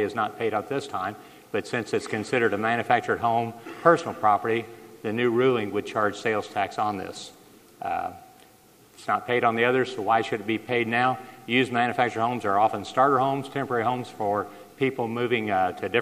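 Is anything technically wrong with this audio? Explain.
Yes. Throughout the clip, the audio was reduced to low bit depth with dither. The sample values were stored with very coarse resolution, consistent with roughly 10-bit words, and dither noise was added before rounding, so the rounding error was randomized instead of following the waveform. The error therefore doesn't produce gritty distortion. It becomes a constant, even white hiss about 35 dB below the signal, present from start to finish.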